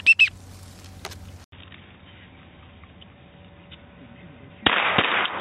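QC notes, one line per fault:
1.44 s to end, input switched to a poorer device: after a gap of about 80 ms the sound turns dull and boxy, with nothing above 3.8 kHz, a level shift of roughly 5 dB and a new, faint background noise. This is likely a change to another microphone or a headset call profile. A plain low-pass filter or codec bandwidth drop would not bring a fresh noise floor, a level jump and a gap at the switch.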